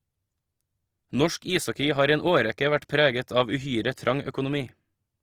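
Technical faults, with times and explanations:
Throughout, Opus compression: the speech sounds rough and grainy, with a noisy, sandy texture on the voiced sounds, while the top end stays open rather than muffled. This is likely Opus working in its music mode at a low rate, consistent with roughly 24 kbps: short of bits, it keeps each band's energy but refills detail with folded or noise-like content, so tones turn coarse instead of swirling.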